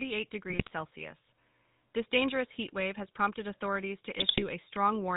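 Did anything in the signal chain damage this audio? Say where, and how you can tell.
Yes. The whole clip has a buzzy, gravelly roughness with nothing above 4 kHz, which points to the codec stage: GSM full-rate encoding, consistent with 13 kbit/s. It models the vocal tract and drives it with a sparse, regularly spaced pulse excitation, which produces that grain.

Two bursts of squawking, popping and gargling occur at 0.50 to 0.70 s and at 4.18 to 4.44 s, the second just after "wave has prompted authorities". These are GSM bit errors from the network stage: corrupted filter, pitch or gain values distort each affected frame.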